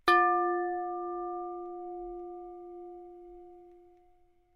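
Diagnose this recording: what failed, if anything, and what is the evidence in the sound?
No stage shows a fault.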